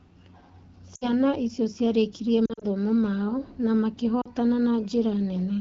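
Speech, carried over a light AMR wideband (HD Voice) link, with lost AMR speech frames in three places. At 0.95 to 1.14 s, just before "icio ciarikirie", about 60 ms of sound drops to near silence. At 2.46 to 2.64 s, between "icio ciarikirie" and "mao na", short gaps scatter across 160 ms, each run no longer than 40 ms. At 4.21 to 4.28 s, after "mao na", a brief 40 ms dip occurs. The decoder patches each gap by reusing the last good frame at falling gain.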